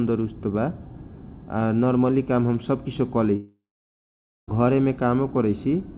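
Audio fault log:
3.36–4.49 s, long network dropout: after "काम हम सब किसीयो" the last sound smears into a fading buzz, then about 0.89 s of silence; 1.12 s never returns. Unlike a brief concealed glitch, the fill dies out entirely, likely because packets stopped arriving.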